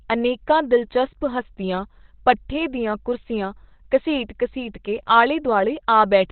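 From start to finish the speech sounds muffled, boxy and hoarse, like a call over an old phone line. Nothing reaches above about 4.2 kHz. This is likely Opus compression running in its speech mode. Starved of bits, the encoder narrows the band and models the voice coarsely instead of coding it in full. The heavy damage fits a rate around 12 kbps.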